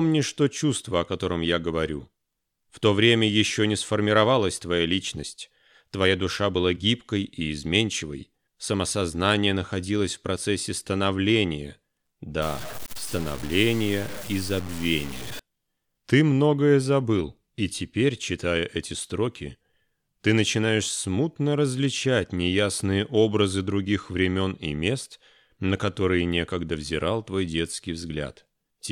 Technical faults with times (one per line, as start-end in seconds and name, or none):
12.42-15.39 low bit depth without dither